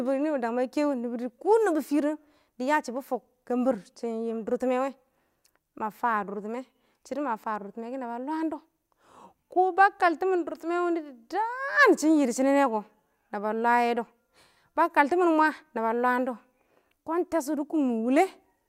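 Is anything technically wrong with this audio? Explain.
No, nothing technically wrong can be heard in this speech recording. There is no fault to point to at any moment in the clip.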